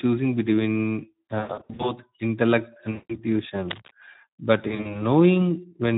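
Speech clip carrying plainly audible Speex codec damage throughout: the CELP coder has too few bits for the excitation, so the speech sounds hoarse and grainy, consistent with a bitrate around 11 kbps. VoIP packet loss concealed by the speech codec occurs at 1.39 to 1.93 s (about 300 ms missing in runs up to 100 ms), 2.91 to 3.20 s, and 4.67 to 5.01 s (runs up to 40 ms). In each gap the decoder extends its last pitch and filter into a fading buzzy tone or coloured noise, and the sound stays weak briefly after packets resume.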